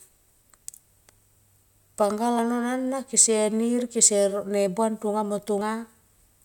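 At 2.39 s and again at 5.61 s the speech jumps abruptly, the second skip noticeably larger, as if roughly 20 ms and then around 70 ms of sound were cut out. This is likely a dropped buffer (overrun), where samples were overwritten before being read and the two sides were joined directly. On the waveform each appears as a sudden discontinuity with no silent gap. The spectrogram shows a thin vertical broadband line where the harmonics jump.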